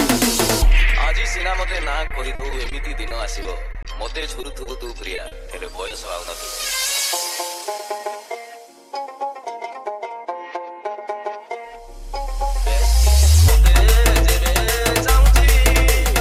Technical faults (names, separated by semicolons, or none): repeated packet loss (robotic sound); jitter buffer speed-up